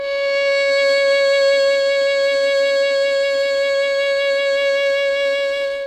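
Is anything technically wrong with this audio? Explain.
No technical faults are audible.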